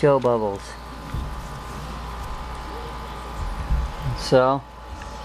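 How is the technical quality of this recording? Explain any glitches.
Nothing in the audio stood out as a glitch or technical problem on listening.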